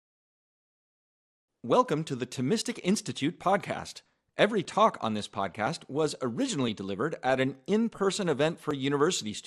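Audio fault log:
throughout MP2 compression: too few bits for MPEG Layer II, likely around 80 kbps, force upper sub-bands to switch off and the remaining bands to be coarsely quantised, so the speech sounds dull and plainly damaged, with a gurgling, granular edge as bands flicker.
5.44–5.60 s DAB burbling: bit errors, at a rate of a little over a tenth of a percent, slip past error correction into the MP2 data, which fits about nine corrupted frames. Wrong samples put short noise blips in single sub-bands and wrong scale factors make sub-bands jump in level, over a brief stretch.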